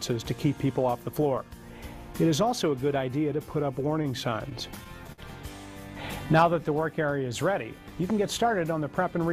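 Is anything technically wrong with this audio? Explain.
Yes, there are four separate problems, mostly timing trouble in the playback path.

From 0.93 s to 8.36 s there's a click roughly every 2.41 s, about four in all. The regular spacing points to clock drift buffer slips, likely two devices on free-running clocks a few tens of ppm apart, so the buffer between them periodically drops or repeats a handful of samples.

Between 3.79 s and 5.20 s the sound stutters and drags. That's repeated stalls: the jitter buffer ran dry seven times, and each time the receiver stretched the last bit of audio, 126 ms in total, with the longest hold 55 ms. Nothing goes missing; it just hiccups.

From 5.80 s to 6.66 s there's a jitter buffer slow-down. The receiver padded in about 60 ms by repeating tiny pitch-length chunks to rebuild its reserve, so playback runs at 94% speed with the pitch unchanged, sounding a little drawn out.

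At the end, from 8.74 s to 9.19 s, the opposite happens, a jitter buffer speed-up. The receiver trimmed roughly 70 ms of short pieces to shed excess delay, so the audio runs at 112% speed, same pitch, and sounds hurried.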